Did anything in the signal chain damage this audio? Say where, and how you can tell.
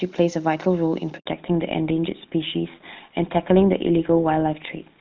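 Yes. At 1.18 s the speech dies away within a few tens of milliseconds and stays silent for about 80 ms, until 1.26 s. That is a handover gap, a network-stage fault. While the call was being moved from one network to another, no speech frames came through, so the decoder had nothing to play and that stretch of speech is simply missing.

From 1.26 s to the end the speech is duller and rougher. Everything above 4 kHz is gone, where before the gap the band reached well past that, with the clean HD Voice sound of AMR-WB at 23.85 kbit/s. This is a fallback to narrowband at the codec stage. The new link carried the call on GSM full rate at 13 kbit/s, a narrowband codec that cannot code anything above 4 kHz.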